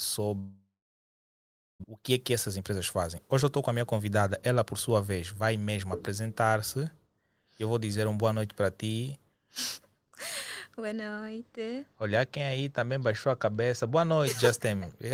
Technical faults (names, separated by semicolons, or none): long network dropout; jitter buffer speed-up; channel delay (comb filtering)